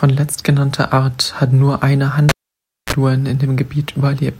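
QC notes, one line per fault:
1.14 s and 3.35 s, bit error spike: two isolated ticks, each peaking at about -23 dBFS and consistent with a single corrupted sample. A flipped bit makes the sample value leap by a power of two and return instantly, producing a broadband click unrelated to the speech around it.
2.29–2.93 s, cable pulled and plugged in: a pop, then about 0.59 s of near silence while the connection is open. Next comes a 31 ms burst of 60 Hz mains buzz as only the plug tip makes contact, and a second pop as the signal reconnects.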